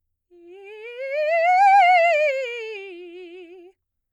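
No technical faults are audible.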